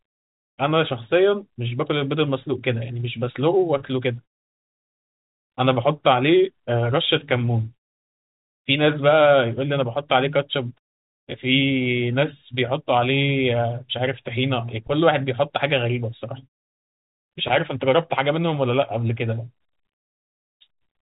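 No technical faults are audible in this speech.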